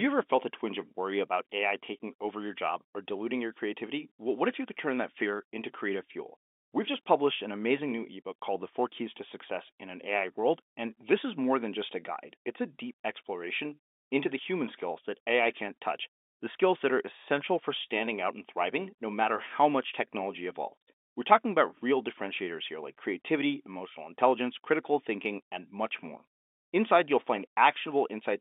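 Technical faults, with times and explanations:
No technical faults, with times and explanations, to report for this speech clip, which carries G.711 telephone coding as expected, with the narrow line band of roughly 250 Hz to 3.6 kHz that this path gives.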